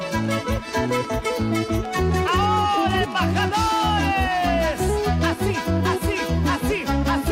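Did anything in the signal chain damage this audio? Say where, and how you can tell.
Yes. A train of clicks runs from 0.03 to 3.75 s: around thirty similar pulses, about 8 per second, irregularly spaced, peaking about 5 dB above the sound. The cause is likely electrical interference entering the analogue wiring or a struggling interface.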